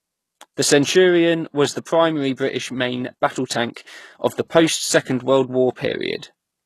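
Throughout, the speech shows HE-AAC compression, likely at a bitrate around 16 kbps. Nothing sounds above 12.3 kHz, and s sounds turn gritty. After "was the", from 1.84 to 1.87 s, pre-echo puts 28 ms of hiss before an attack. It recurs at 3.74 to 3.76 s, between "main battle" and "of the." Block-spread coding noise leaks ahead of each onset.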